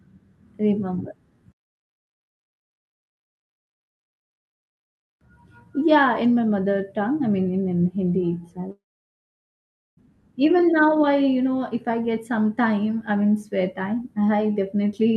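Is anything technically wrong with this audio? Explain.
Yes. A long network dropout, likely, runs from 8.71 to 9.99 s. Packets stopped arriving. The last sound fades as a brief buzz or hiss, then about 1.2 s of silence, before "even now i" resumes with the gap lost.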